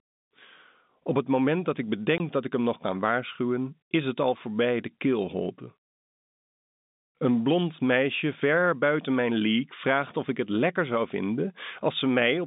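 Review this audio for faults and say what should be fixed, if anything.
There's a packet loss filled with silence from 2.18 to 2.20 s, right after "het moment dat ik", and before "dat ik hem nog". It's a hard-edged 20 ms hole, which fits one dropped packet, on top of the normal G.711 phone band up to about 3.7 kHz. Turning on packet loss concealment and a larger jitter buffer at the receiver would cover that gap.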